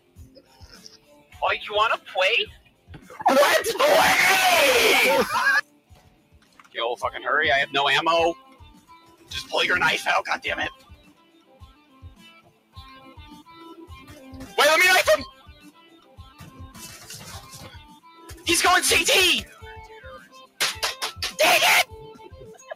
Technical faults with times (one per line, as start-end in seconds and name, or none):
0.00-22.75 noise suppressor applied to music or sounds
0.00-1.34 sound cut by the noise suppressor
2.58-3.11 sound cut by the noise suppressor
5.62-6.75 sound cut by the noise suppressor
8.38-9.31 sound cut by the noise suppressor
10.74-13.11 sound cut by the noise suppressor
15.32-16.59 sound cut by the noise suppressor
17.84-18.26 sound cut by the noise suppressor
20.26-20.59 sound cut by the noise suppressor